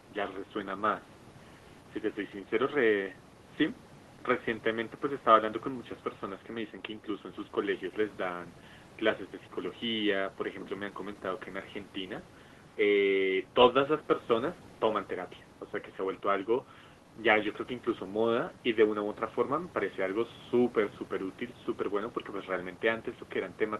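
No technical faults can be heard in this recording.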